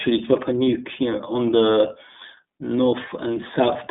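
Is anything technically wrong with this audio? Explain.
Yes. Throughout the speech the iLBC codec is plainly audible. Nothing passes above 3.8 kHz, and because each frame's excitation is coded on its own, which fits 30 ms frames at 13.33 kbps, the sound turns rough and synthetic. That grainy texture sets it apart from a simple band limit.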